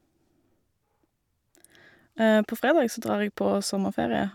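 No audible faults turn up anywhere in the clip; the speech runs without dropouts, clicks, glitches or level jumps.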